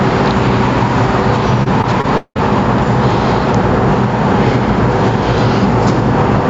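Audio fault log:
1.63–2.40 s, repeated packet loss (robotic sound): Five gaps hit in quick succession, the longest about 179 ms. Each is patched by stretching the previous sound, so about a third of this stretch is filled-in. The sound turns choppy, with pieces missing.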